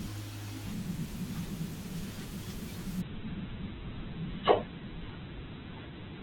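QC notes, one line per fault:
3.01–6.22 s, adaptive stream at a lower bitrate: the speech abruptly turns thin and grainy with no gap, losing everything above 4.1 kHz to the end. This points to the player switching from roughly 64 kbit/s to 8 kbit/s Opus as the connection slowed.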